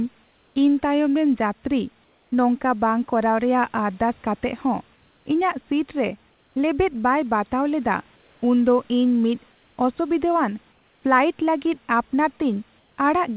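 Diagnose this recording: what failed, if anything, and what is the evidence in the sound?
Comfort noise in place of the background at 0.24, 2.04, 4.96, 6.3, 8.16, 9.52, 10.72 and 12.78 s, each lasting 0.2 to 0.32 s. The room's textured background becomes steady, featureless hiss about 2 to 4 dB quieter, likely from call-processing discontinuous transmission with receiver-synthesised fill.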